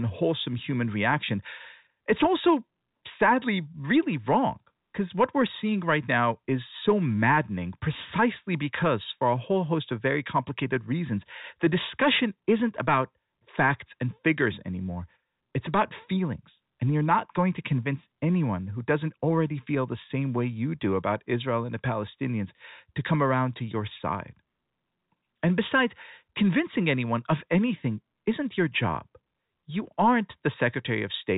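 Nothing's wrong with this speech clip: it's simply G.711 telephone coding doing its normal job, so the sound stops at about 3.8 kHz as phone audio does.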